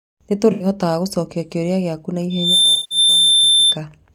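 A speech clip with two brief smeared, hollow patches: one from 0.52 to 0.66 s, just before "gũcokia kĩũria gĩaku na", and another from 2.73 to 2.98 s. This is AAC frame loss with concealment. The decoder patched roughly 85 ms and 170 ms gaps from the last good spectrum, which fits about four and eight lost frames. Right after "gũcokia kĩũria gĩaku na", a pure 3.6 kHz tone swells over a few tenths of a second and rides a few dB above the speech from 2.30 to 3.78 s. This is loudspeaker feedback squeal, where the microphone re-amplified its own loudspeaker at that frequency until the tone sustained itself.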